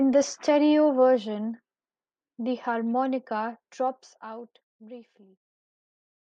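From 3.56 s to 5.08 s the speech level falls by roughly 15 dB in coarse, unsmoothed steps, about 30 per second, producing zipper noise: each jump in gain leaves a small click, so a fast ticking rides on the speech throughout the fade.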